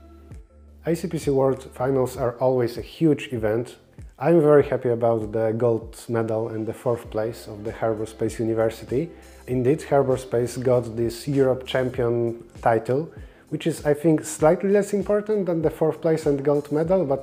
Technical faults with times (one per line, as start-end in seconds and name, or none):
none